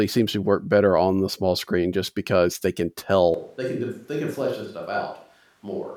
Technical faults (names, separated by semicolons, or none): switch to a distant microphone